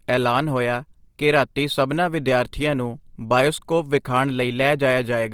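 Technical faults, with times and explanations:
Throughout, Opus compression. The speech sounds grainy and rough, with a hissy texture on tonal parts. Content still reaches 20.2 kHz. Short bands are filled with noise-like energy, not left empty. This likely fits Opus music mode near 24 kbps.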